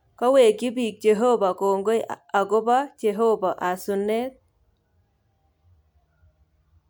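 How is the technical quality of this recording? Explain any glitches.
No glitches or technical faults can be heard anywhere.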